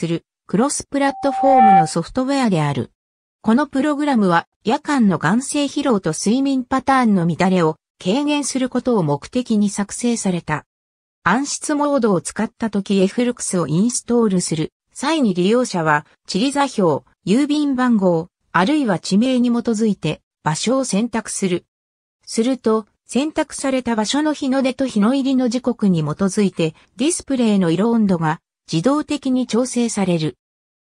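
At 1.04 s a steady tone near 775 Hz rises out of the sound, swelling over about half a second into a piercing squeal that ends up roughly ten decibels louder than everything else, then stops at 1.94 s. This is loudspeaker feedback squeal: a microphone was hearing the loudspeaker it drove, and at 775 Hz the round trip through that loop gained rather than lost level, so the tone kept feeding itself.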